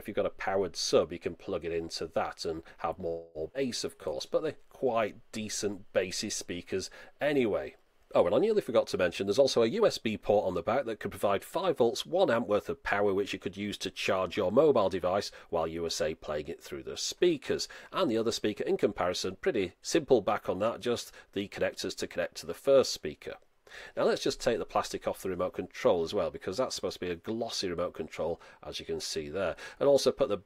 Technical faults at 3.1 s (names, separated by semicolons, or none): call audio freeze